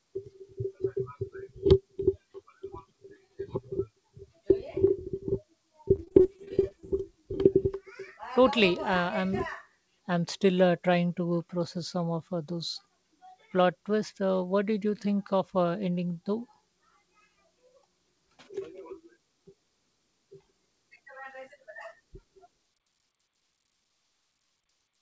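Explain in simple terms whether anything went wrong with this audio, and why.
Between about 5.96 and 6.84 s the speech turns choppy. That's repeated packet loss: over that stretch, bits of audio went missing again and again, a dozen small holes, the longest about 40 ms. Each time, the receiving end covered the gap by stretching out the last bit of sound it had, so roughly a quarter of that stretch is patched-over filler. The call codec also tops out at 8 kHz.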